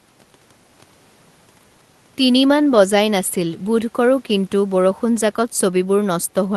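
No technical faults are audible.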